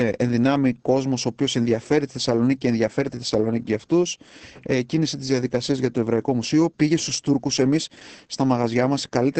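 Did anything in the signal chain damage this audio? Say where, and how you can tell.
Yes, at the codec stage: Opus voice compression throughout the speech. Nothing survives above 8.7 kHz, and the voice sounds muffled, hoarse and slightly robotic, which points to wideband SILK at roughly 10 kbps, where the excitation is quantised too coarsely to keep natural texture.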